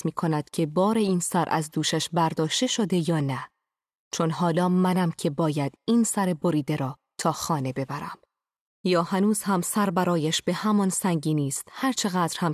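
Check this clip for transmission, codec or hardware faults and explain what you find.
Nothing turns up here; the speech comes through without any transmission, codec or hardware trouble to point to.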